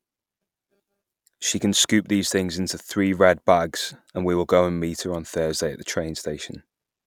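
No technical faults are audible.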